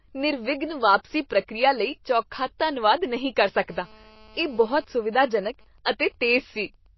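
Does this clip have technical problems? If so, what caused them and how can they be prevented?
Yes. Throughout the speech the sound is watery and swirly, with nothing above 5.8 kHz, so sibilants lose their top and the codec damage is plainly audible. This is likely MP3 compression at a low bitrate, which fits about 24 kbps. Starved of bits, the encoder drops weak frequency lines that flicker on and off between frames and applies a fixed treble cut. Encoding at a higher bitrate, or keeping a lossless master, prevents it.

From 3.69 to 4.85 s a hard, raspy buzz at 217 Hz sits about 28 dB below the speech and bears no relation to it. This is GSM phone buzz from a 2G phone on a call nearby. It transmits radio bursts 217 times a second, and the audio circuit rectifies those pulses into a steady buzz rich in harmonics. Keeping phones away from the recording gear, or switched off or in flight mode, prevents it.

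From 4.94 to 6.87 s the buzz gives way to even ticks with a longer buzz twice a second, around 35 dB below the speech. These are GSM signalling bursts from a 2G phone nearby while its user is silent in the call. The phone sends only sparse groups of 217 Hz radio bursts, and the circuitry rectifies each group into audio. The same remedy applies: keep the phone switched off or well away from microphones and cables.

At 5.85 s a short hiss, about 11 ms long, comes just before a sharp attack, and the onset sounds smeared. This is pre-echo. The transform codec spreads its quantisation noise across a whole block, so noise meant for the loud attack also fills the quiet moment before it. A higher bitrate, or an encoder that switches to short blocks on transients, prevents it.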